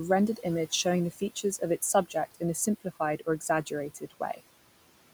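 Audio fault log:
throughout: noise suppressor artifacts. The suppressor estimates the steady room noise, which sits about 18 dB below the speech, and pulls down each frequency band it judges to be noise by up to about 18 dB, frame by frame. The background therefore drops away in the gaps and swells back under speech.
1.11–1.61 s and 3.9–4.41 s: speech cut by the noise suppressor. In both windows the suppressor mistook quiet parts of the speech for background and turned them down with the noise, by about 14 dB at most in the first window and about 17 dB in the second. The first comes just after "image showing the". In each window only about 150 ms in total is affected, so the affected speech sounds swallowed or faint rather than fully missing.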